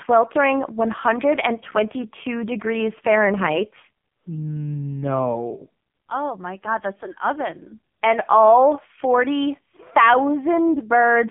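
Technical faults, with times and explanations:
Throughout: AMR narrowband mobile codec. Nothing above 3.6 kHz survives, with a 150 Hz to 3.5 kHz line band. The heavy buzzy, synthetic texture comes from resynthesising speech with a pulse-driven vocal-tract model at a very low rate, which fits about 6 kbps. A simple low-pass filter would only muffle the sound without adding that buzz.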